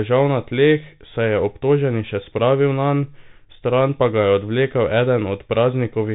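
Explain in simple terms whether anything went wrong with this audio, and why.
The speech sounds muffled and scratchy from start to finish, with grainy hiss, because a Bluetooth CVSD headset codec removed everything above 3.8 kHz.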